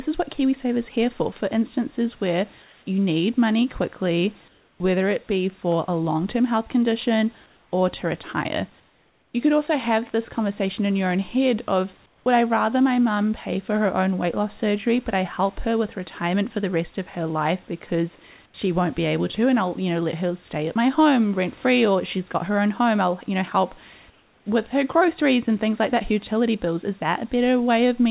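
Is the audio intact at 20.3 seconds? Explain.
Yes, the speech at 20.3 s is intact, with no dropout, glitch or distortion at that moment.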